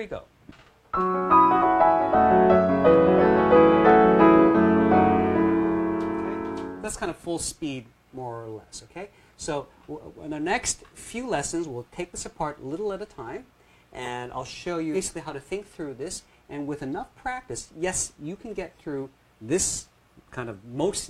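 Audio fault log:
1.58–1.64 s and 14.91–14.96 s, damaged data in a compressed stream: the decoder loses frame sync on corrupt bytes and emits a chirp, click or short hole.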